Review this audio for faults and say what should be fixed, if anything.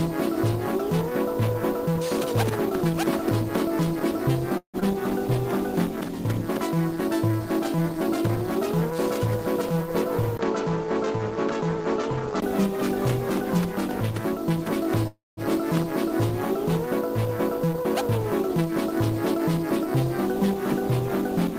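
At 4.57 to 4.85 s the sound stops and the last fragment is stretched into a fading buzz lasting about 241 ms, ending in 100 ms of silence. When the audio returns, about 120 ms is gone, which points to a long network dropout as the likely cause. That lost stretch is what separates it from a freeze. Stronger packet-loss protection or redundancy on the link would prevent it.

From 6.75 to 8.95 s a jitter buffer slow-down plays the audio at 96% speed. Repeated pitch periods add about 100 ms, so the sound drags while its pitch stays the same. A wrong playback rate would have shifted the pitch as well. Smoother target-delay adjustments in the buffer would avoid this.

At 10.37 s there is a 20 ms silence, and through 12.42 s nothing is present above 7.6 kHz. A new noise floor appears, roughly 40 dB down, with no real change in level. The likely cause is an input switched to a poorer device. The new background noise and the gap at the switch mark it apart from a codec bandwidth drop. 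Locking the input device during recording would prevent it.

At 15.07 to 15.4 s a likely call audio freeze fills about 297 ms, fading to 180 ms of silence. The audio then continues exactly where it stopped, with nothing missing and a delay about 297 ms longer. That continuity distinguishes it from a dropout. Reducing network congestion or bursty delivery on the path would prevent it.

From 17.66 to 18.72 s a jitter buffer speed-up runs the audio at 106%. Trimmed pitch periods remove roughly 70 ms, so the sound feels hurried while its pitch stays unchanged, unlike a resampling error. Draining excess buffer delay more gradually would avoid it.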